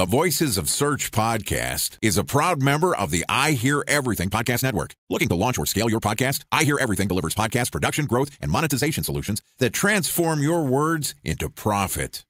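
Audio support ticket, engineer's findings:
Speech rushed from 4.07 s to 9.40 s, pitch unchanged, pace jumps abruptly at both edges. Time-stretched section, roughly 1.8x speed; likely a length-fitting stretch that dropped short segments to compress time while holding pitch.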